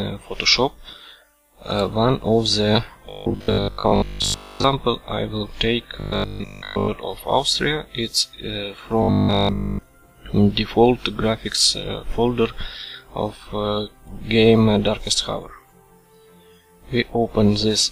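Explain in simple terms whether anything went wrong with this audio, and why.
Robotic sound from repeated short buffers turns the audio into a rigid 50 Hz buzz at 3.1–4.64 s, 6.0–6.9 s and 9.03–9.83 s. New audio likely arrived too slowly, so a 20 ms snippet repeated, replacing most real sound, and all of it in the last stretch.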